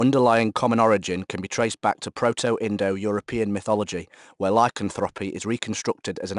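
A speech recording with a gritty hiss riding on every louder stretch for its whole length, and nothing above about 10.6 kHz, so it sounds somewhat dull. This is 4-bit ADPCM compression: each sample is coded as a coarse 4-bit step from a predicted value, so the quantisation error becomes broadband noise that rises and falls with the speech level. The damage is plainly audible, and the data rate it implies points to about 89 kbps.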